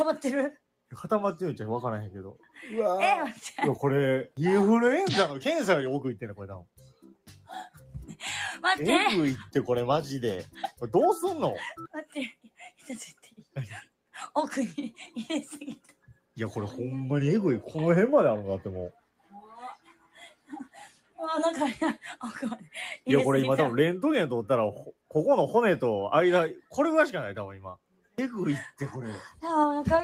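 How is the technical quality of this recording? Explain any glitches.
The technical quality is compromised by a noise suppressor built for speech.

Throughout the clip, a noise suppressor is applied to sounds that are not speech. It treats steady, sustained content as background noise and pulls it down. The level swings by about 5 dB as the processing reacts. Onsets pass through, but held parts and decays sink. The result is a pumping, fluttering texture, and the sound loses body and ambience.

At eight points, the noise suppressor cuts the sound much harder than elsewhere: 2.35–2.56 s, 6.6–7.29 s, 13.18–13.56 s, 15.84–16.17 s, 18.92–19.51 s, 19.76–20.5 s, 20.92–21.18 s and 27.76–28.18 s. The drops reach about 8 to 12 dB, and the deepest are at 6.6 s, 19.76 s and 27.76 s. Each time, the processor judged the sustained sound to be noise. The sound briefly ducks or has its tail cut short.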